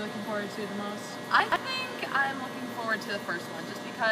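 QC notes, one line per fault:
1.40–1.56 s, chunks out of order: within this 160 ms span, a 40 ms block of audio plays three blocks late, after material that should have followed it. That leaves three hard joins, heard as a brief jumbled scramble. Unlike a dropout, nothing is missing. Unlike a stutter or repeat, nothing plays twice. The sound is all there, just shuffled, and the timing outside the span is unchanged.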